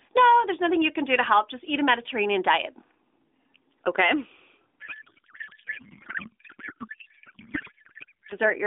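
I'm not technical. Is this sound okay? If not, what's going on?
No. From 4.80 s to 8.35 s the speech turns into garbled, warbling noise. This is a codec payload misread. The phone system's two ends disagree on how the sound data is packed, so the receiver unpacks it wrongly and plays nonsense.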